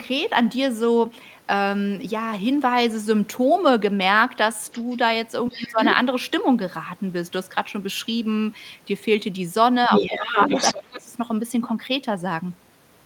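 Other side's voice leaking through appears first at 4.67–4.96 s, faint at roughly 25 dB under the talker, then returns at 5.49–5.91 s only slightly quieter and at 9.91–11.01 s about as loud as the speech. The likely cause is far-end audio from the loudspeaker reaching the microphone and surviving an incomplete echo cancellation. Speech suppressed in double talk overlaps these stretches at 5.50–5.79 s (a dip of around 15 dB), 9.88–10.21 s (a mild dip of about 5 dB) and 10.73–11.10 s (a deep drop of around 25 dB). The talker's level sinks in these spots, most likely because the canceller could not tell near speech from echo and attenuated both.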